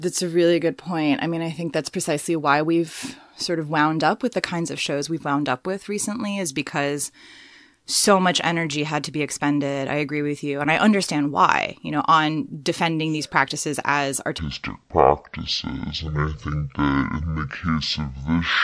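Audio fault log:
14.39 to 18.63 s, wrong sample rate: the speech drops a full octave (12 semitones) and drags at half speed, sounding low and slow. The samples play at half their capture rate without conversion, which fits 44.1 kHz audio played at 22 kHz.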